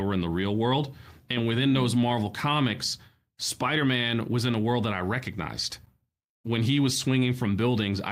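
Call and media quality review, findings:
No faults found in recording.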